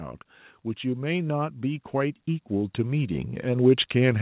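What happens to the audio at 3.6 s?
At 3.6 s the automatic gain rising is still under way. It began at 0.81 s and runs to the end at 4.22 s. The gain control judged the input too quiet and kept raising its gain, so speech and background noise swell together. On the waveform the envelope, noise floor included, climbs steadily. On the spectrogram every band brightens together, below a ceiling at 4 kHz that fits a G.711 A-law call path.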